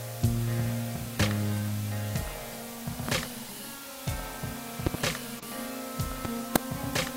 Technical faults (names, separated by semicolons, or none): low bit depth with dither; loud pop; corrupt frame decoded